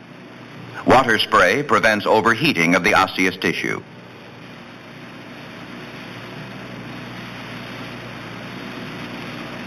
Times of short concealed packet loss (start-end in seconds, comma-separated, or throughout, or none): none